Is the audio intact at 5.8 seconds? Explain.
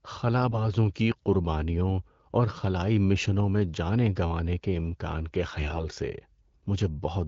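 No. From 5.50 to 5.86 s, right after "گنوانے کے امکان کے", AMR bit errors corrupt the less protected frame bits at around 5 percent, misplacing excitation pulses. Unlike packet loss, nothing drops out: pitch and level hold while the sound turns hoarse, scratchy and gargly.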